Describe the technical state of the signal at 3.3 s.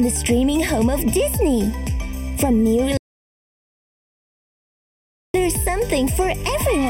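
At 3.3 s you're right inside an audio dropout to silence, running from 2.97 to 5.34 s, about 2.4 s of dead silence with no room tone at all. Most likely the input was lost and the recorder just kept writing silence, so whatever happened in that stretch is gone.

There's also channel delay (comb filtering) across the whole clip. One channel trails the other by something under half a millisecond, and summing them to mono carves evenly spaced notches starting around 1.5 kHz, which leaves the audio hollow and phasey wherever there's any signal.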